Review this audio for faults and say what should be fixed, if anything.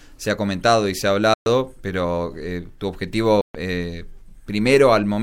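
Two short dropouts to silence: one from 1.34 to 1.46 s, about 120 ms, and one from 3.41 to 3.55 s, about 130 ms. Each time the sound just stops dead and then carries on from where it left off or slightly later. That's most likely a Bluetooth stall: radio interference held up packets, the headphones' buffer ran empty, and playback waited for the resends. Keeping the phone close with a clear line of sight, away from busy 2.4 GHz gear, should prevent it.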